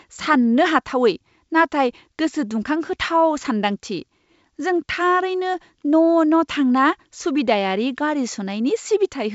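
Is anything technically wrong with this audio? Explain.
No, nothing technically wrong can be heard here.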